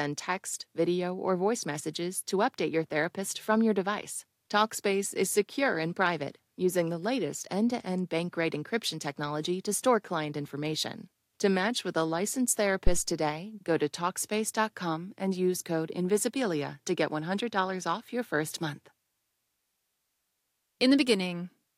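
Speech, with a phantom power thump at 12.87–13.04 s, between "match with a licensed" and "today go to". It is a deep thump peaking around -11 dBFS and decaying within about 38 ms, from a supply switching on or off on the live input. Unlike a plosive pop, it is unrelated to any speech sound.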